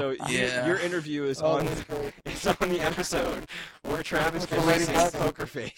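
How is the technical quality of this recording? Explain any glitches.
The recording has one clear glitch.

Buffer tearing runs from 1.60 s to 5.46 s. Writer and playback hardware have slipped, so roughly half of each period replays audio about 10 ms old, with hard joins. This gives a robotic 172 Hz buzz, which fits a 256-sample buffer.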